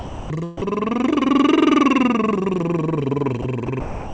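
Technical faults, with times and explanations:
0.00–0.30 s, 0.57–0.61 s, 3.42 s, 3.66–3.68 s and 3.80–4.13 s: sound dropped by the voice detector. The music gives way to steady noise, then returns. The sender's detector likely took the music for background and stopped sending. The receiver filled each gap with comfort noise.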